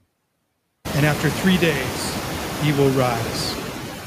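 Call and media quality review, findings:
Noise suppressor artifacts, whole clip: suppressor gating steady-noise bands frame by frame, cutting noise by about 8 dB in gaps. Room noise, up by about 25 dB from around 1 s and about 9 dB under speech, sinks between words and swells back under them, giving audible pumping.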